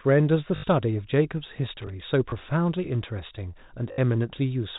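From 0.56 to 0.64 s, packet loss with the last packet repeated fills an 80 ms gap. The receiver loops the same short chunk, which fits 20 ms packets, so a brief robotic buzz near 50 Hz appears. A waveform shows identical repeated blocks with steps at each seam, and a spectrogram shows evenly spaced vertical click lines.

At 1.82 to 1.90 s comes loose connector crackle. A failing contact chops the signal on and off at random, producing an irregular scratchy burst. The waveform shows jagged dropouts and spikes, and the spectrogram shows scattered broadband vertical streaks with uneven spacing.

The same repeated-packet concealment returns at 2.30 to 2.32 s as a single 20 ms blip and at 3.92 to 3.98 s as a 60 ms buzz. Both sit within telephone-band audio capped at 4 kHz.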